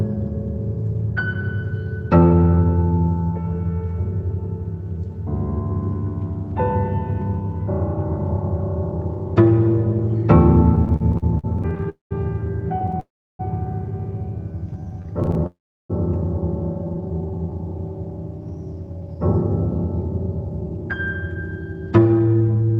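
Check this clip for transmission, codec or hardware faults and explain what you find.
Yes, the clip has network-delivery faults throughout its second half: stuttering stalls, three freezes, two stretches of slowed playback and a long hurried stretch at the end.

Repeated stalls (stutter) occur from 10.75 to 12.98 s and from 14.73 to 15.44 s. Packets arrived later or more slowly than they were played, so the receiver's buffer kept running dry and the last sound was extended to bridge each gap. The first span has 20 gaps totalling 332 ms, the longest 54 ms. The second has 10 gaps totalling 108 ms, none longer than 13 ms. In both spans about 15% of the time is filled-in sound. Nothing is lost, but the audio drags and catches repeatedly.

A call audio freeze is heard three times: 11.89 to 12.13 s (213 ms), 13.00 to 13.41 s (393 ms) and 15.46 to 15.92 s (432 ms). Each one is likely caused by packets held up in transit until the jitter buffer emptied. 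The last sound continues briefly, then fades to silence for about 150 ms, 330 ms and 350 ms respectively. The audio then resumes from where it stopped, so each freeze inserts a pause without losing anything.

A jitter buffer slow-down runs from 14.52 to 15.14 s, adding 104 ms so that playback drops to 85% speed. A second runs from 16.84 to 17.52 s, adding 136 ms at 81% speed. The receiver was rebuilding its reserve, repeating single pitch periods and fragments of pauses to stretch time. Pitch stays the same, but sounds are drawn out, audibly slower than the surrounding audio.

A jitter buffer speed-up covers 18.50 to 22.77 s, with playback running at about 112%. The buffer held more than its target. To bring the latency back down, the receiver trimmed short slices of one or a few pitch periods again and again, roughly half a second in total. The pitch is unchanged, but this closing stretch sounds noticeably rushed.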